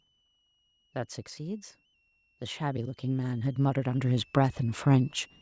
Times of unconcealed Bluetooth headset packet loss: none

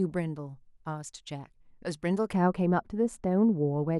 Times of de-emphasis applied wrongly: 2.33-4.00

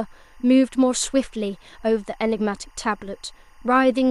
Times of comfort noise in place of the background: none

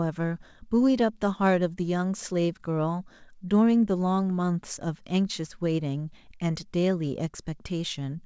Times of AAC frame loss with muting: none

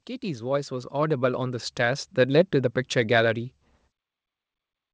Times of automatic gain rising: 0.20-2.84

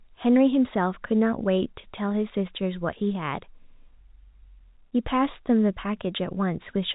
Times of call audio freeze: none

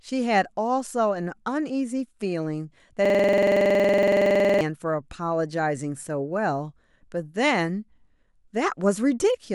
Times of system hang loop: 3.05-4.61

